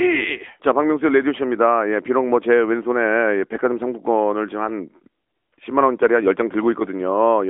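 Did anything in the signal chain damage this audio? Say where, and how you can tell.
Yes, at the codec stage, for the whole clip. This is the AMR narrowband mobile codec. Nothing passes above 3.6 kHz, and the band sits between 250 Hz and 3.4 kHz. The speech sounds plainly buzzy and synthetic, which fits a mid-rate mode near 10 kbps.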